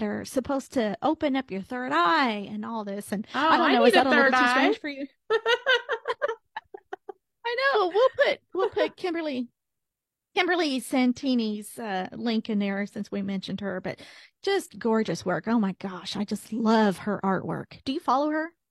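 At 7.71 s the speech is interrupted by a short burst of damaged data in a compressed stream, lasting until 7.77 s, about 60 ms. A stretch of the encoded bitstream there is corrupt, so the decoder misreads those frames, loses synchronisation and scans forward for the next valid frame header. The result is a brief glitch breaking into the speech.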